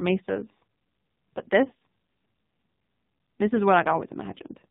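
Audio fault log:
Throughout: AMR narrowband mobile codec. The speech is band-limited with nothing above 4 kHz, so it sounds boxed-in and phone-like. The codec rebuilds the voice from a vocal tract model driven by sparse pulses, and here the coding damage is heavy. The result is buzzy, synthetic speech that fits a low AMR-NB bitrate of around 5.9 kbps, where too few bits are left to capture the finer detail of the waveform.
1.68 to 1.72 s: lost AMR speech frame. A gap of about 20 ms of speech, which points to a single lost frame, failed to arrive intact. The decoder filled it by reusing the last good pitch and vocal tract settings at reduced gain. This produces a brief dip or warble instead of a hard dropout. The speech after the gap resumes weak or rough for a moment while the decoder recovers its state.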